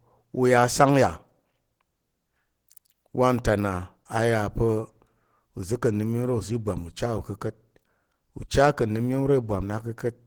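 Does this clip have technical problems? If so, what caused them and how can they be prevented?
Yes. Throughout the speech the sound is hoarse and muffled, with a plainly audible rough, grainy texture. The likely cause is Opus compression in its hybrid speech mode at a low rate, consistent with about 16 kbps, where bands are filled with noise rather than detail. Encoding at a higher bitrate would prevent it.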